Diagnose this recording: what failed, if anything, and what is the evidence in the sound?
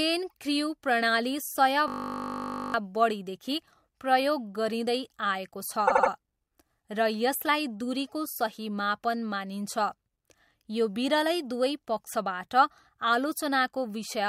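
Driver or buffer stage. From 1.88 to 2.74 s the speech stops and a steady buzz takes over. Its pitch is 50 Hz. That matches a 20 ms slice of audio replaying 43 times. This is a system hang loop. The host or driver froze, and the sound hardware kept cycling through one ring buffer. A 20 ms loop fits a small output buffer. Roughly a second of real audio never made it out.

Codec or storage stage. From 5.87 to 6.10 s there is a stutter. A 78.4 ms block plays three extra times. These are repeated frames. A short run of compressed frames was written or delivered again, and the decoder played it again. The clip is about 235 ms longer than it should be. Nothing in this section is lost.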